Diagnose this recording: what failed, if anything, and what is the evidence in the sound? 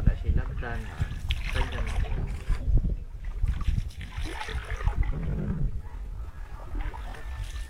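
Time-stretched section from 3.88 s to the end: the pace drops to 0.64x at unchanged pitch, so the audio drags. This is likely software repeating short pieces to fill length.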